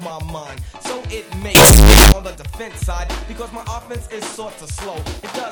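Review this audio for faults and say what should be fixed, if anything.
From 1.55 to 2.12 s the sound turns into a blast of harsh, very loud noise, with quiet background as loud as the main sound. This is likely float read as integer: 32-bit float samples decoded as 32-bit integers. The waveform becomes a near-square block at an almost fixed, high level, and the spectrogram fills with broadband energy. To prevent it, carry the sample format through every conversion step and check that reader and writer agree on float versus integer.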